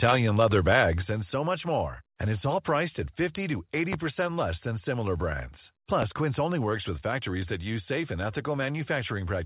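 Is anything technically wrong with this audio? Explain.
Yes, there are three faults in this speech recording: one sudden drop in level and two loud pops.

At 1.02 s, just before "and so much more", the voice and the background both fall by about 4 dB in a single step. This is likely a microphone volume stepped down: the call software judged the input too hot and cut the device's input volume at once instead of easing it down.

Between 3.93 s and 3.96 s, just before "less than similar brands", a sharp pop sits on top of the speech, well above its level, while the voice carries on underneath. This loud pop is likely a brief voltage spike from a connector, switch, static discharge or driver glitch, which the following circuitry shapes into a short click.

A second loud pop of the same kind and strength sounds between 6.02 s and 6.06 s, just after "less than similar brands". It likely has the same origin: a momentary electrical jolt added to the signal rather than anything in the sound itself.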